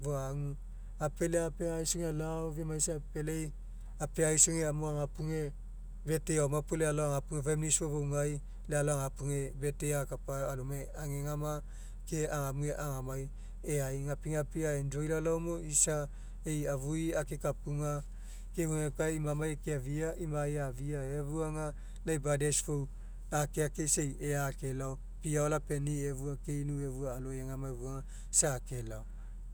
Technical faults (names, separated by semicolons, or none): none